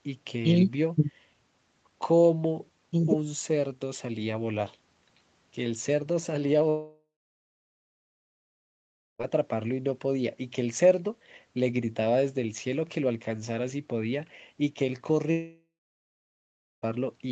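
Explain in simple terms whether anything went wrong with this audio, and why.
A likely long network dropout cut off the incoming audio twice, from 6.69 to 9.21 s and from 15.31 to 16.84 s. Each time the last sound trails off briefly, then silence, and the lost speech never returns.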